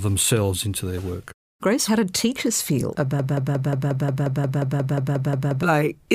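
Speech, with a broken-record loop from 3.19 to 5.63 s just after "how did teachers feel": a 178 ms fragment repeats about 14 times, likely from a stalled player or stream resending its last buffer. Spectrogram and waveform show identical blocks tiled back to back.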